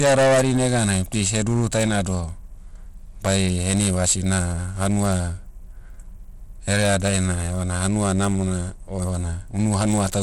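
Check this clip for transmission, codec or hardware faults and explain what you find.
Two faults run through the whole speech clip: heavy clipping and codec damage.

Hard clipping, throughout. The speech was driven about 15 dB past what a stage in the chain could pass, so every peak is sliced flat at the ceiling, with something like seven percent of the waveform pinned there. The squared-off tops add a spray of high harmonics, and the result is a harsh, buzzy fuzz on each louder syllable rather than occasional crackle.

Bluetooth SBC compression, throughout. The sound has the plainly audible grit and smeared, unstable treble of a coarse sub-band codec, with nothing above 16.5 kHz. The likely cause is an SBC link, with a bit budget that fits roughly 96 kbps. That budget starves the upper bands and quantises the rest roughly, so the high end flickers and a granular, aliased noise sits on top of the speech.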